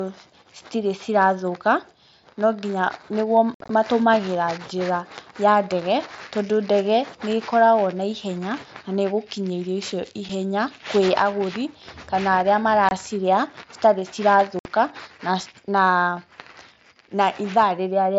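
Speech over a wideband mSBC headset link with unconcealed Bluetooth headset packet loss: holes with abrupt edges at 3.54 to 3.70 s (chopped, longest gap 60 ms), 10.29 s, 12.89 to 12.91 s right after "agũri kana arĩa", and 14.59 to 14.65 s. Dropped voice packets there were replaced by silence or an idle pattern instead of being patched over.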